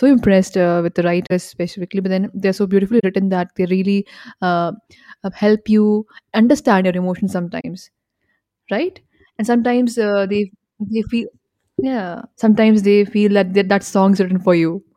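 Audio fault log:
1.27–1.32 s, 2.99–3.04 s and 7.60–7.65 s: corrupt frame concealed. After "impressed uh with the", after "so beautifully" and after "you understand your emotions" come concealed stretches of about 50 ms each. A length like that points to two damaged AAC frames per event, which the decoder caught and patched over rather than passing on as a squeak.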